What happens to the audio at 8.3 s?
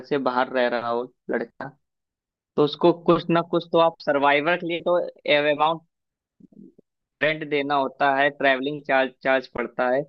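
At 8.3 s the speech continues cleanly, with no dropout, click, distortion or other fault at that moment.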